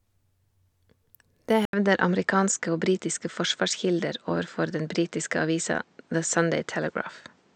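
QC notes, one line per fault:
1.65 to 7.55 s, input switched to a poorer device: after an 80 ms gap the speech dulls, nothing above 8.4 kHz, new noise roughly 40 dB down, level unchanged, likely a narrower-band microphone. Spectrogram shows a blank column, then a flat ceiling.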